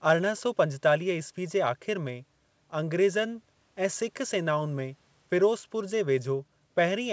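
No technical faults occur anywhere in this speech, so there is nothing to place in time order.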